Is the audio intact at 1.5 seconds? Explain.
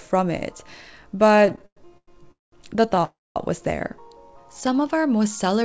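No. At 1.5 s the audio is inside a run of repeated stalls (stutter) from 1.29 to 2.08 s. Late packets kept emptying the jitter buffer, and the receiver stretched the last sound across thirteen gaps, the longest 104 ms. Nothing is lost, but the audio drags and stutters.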